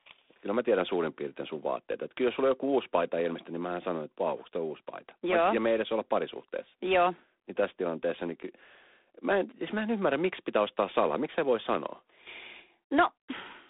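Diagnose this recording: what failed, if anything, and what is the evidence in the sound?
G.726 ADPCM damage runs throughout the speech, from start to end, a fault at the codec stage. A harsh, rasping hiss rides on the speech and rises and falls with its level, and the band sits between roughly 250 Hz and 3.6 kHz with nothing above 3.8 kHz. Each sample carries only a few bits of difference from an adaptive prediction, so the quantisation error tracks the signal. The roughness points to the 24 kbit/s mode rather than the cleaner 32 kbit/s.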